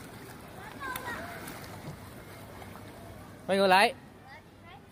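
Nothing goes wrong anywhere in this one; there's no glitch, dropout or distortion to point to from the first moment to the last.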